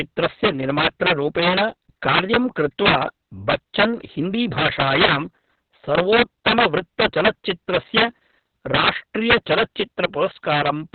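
Integer overflow runs through the whole clip. The loudest moments of the speech were driven about 12 dB beyond what the integer format can hold. Instead of being held at the ceiling, those peaks wrapped around to the opposite extreme. Only a small share of samples, around 2 percent, cross the limit, so the damage lands on the strongest syllables as abrupt, violent cracks. Clipping flattens peaks into a buzzy, fuzzy distortion; here each overshoot jumps across the full range, so the sound is a harsh snap rather than a thickening.

Opus voice compression also affects the entire clip, in its SILK linear-prediction mode at narrowband. Nothing is present above 4.3 kHz, so the speech sounds muffled and telephone-like. The excitation is coded very coarsely, which fits a bitrate of roughly 6 kbps and long frames of around 60 ms. This gives a hoarse, slightly robotic texture. A plain low-pass filter would only dull the sound. 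This codec also roughens and smears the voice itself.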